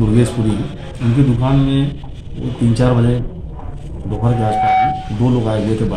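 Loudspeaker feedback squeal appears from 4.13 to 5.32 s as a steady 752 Hz tone that swells over about half a second to roughly 5 dB above the sound. A microphone is hearing its own loudspeaker, and at that frequency the loop gain exceeds one.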